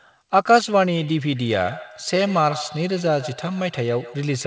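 Speech with a thin, ringing repeat trailing each phrase from 0.97 s to the end, returning at a steady interval of roughly 150 ms and peaking about 15 dB below the speech: feedback echo between two devices, where one device's playback re-enters the other's microphone beyond its echo canceller's reach. The audio is also band-limited to 8 kHz, consistent with a wideband call codec such as G.722.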